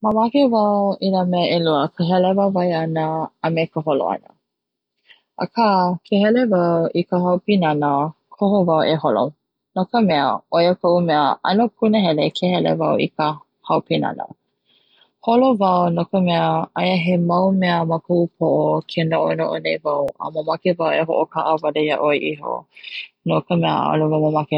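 A speech clip with clock drift buffer slips. A short click recurs every 5 seconds, from 0.12 s to about 20.1 s. The last one comes just before "a mamake wau e". The steady spacing points to two devices running on separate clocks. The likely cause is a mismatch of around 200 parts per million. The buffer between them slowly drifts until a few dozen samples are dropped or repeated at once. Each jump is heard as a click.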